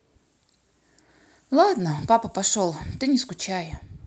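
Two brief rough, noisy patches interrupt this speech recording, at 1.8 s and from 3.03 to 3.05 s, with no gap in either. Each is a lost packet rebuilt from error correction: one 20 ms packet went missing, and the decoder played the lower-quality Opus copy carried in the next packet instead. The speech passes through a WebRTC call path whose high end stops at 8 kHz.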